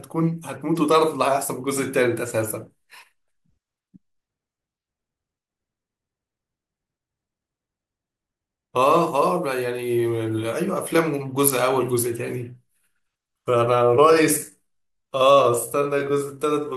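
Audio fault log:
13.73–16.77 s, time-stretched section: the speech suddenly slows to 0.72 times its pace with no drop in pitch, dragging to the end. The likely cause is software lengthening this passage by repeating short pieces so the pitch stays put.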